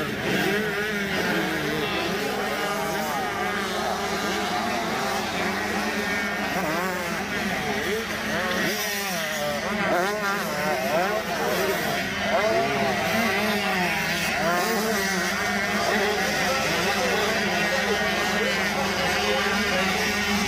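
Nothing in the audio stood out as a fault on listening.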